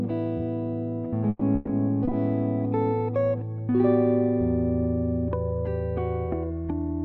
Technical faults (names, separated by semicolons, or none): short concealed packet loss; burst of packet loss